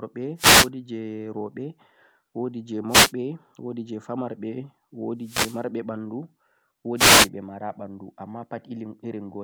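Four wireless microphone noise hits interrupt the speech, at 0.36–0.70 s, 2.88–3.12 s, 5.20–5.64 s and 6.96–7.29 s, each a short swish of static lasting a quarter to half a second. The FM radio link fades as reflected paths cancel the signal, and receiver hiss rises over the voice. On a spectrogram each appears as a broadband vertical smear; the waveform shows dense noisy bursts.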